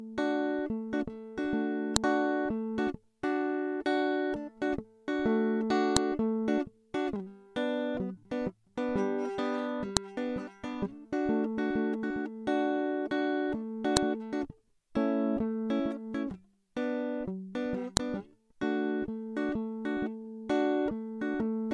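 Sharp clicks land at 1.96, 5.97, 9.97, 13.97 and 17.97 s, every 4.0 s, a file header played as audio where joined music pieces kept their header bytes. Unlike random dropout clicks, these are loud and evenly spaced, regardless of the music.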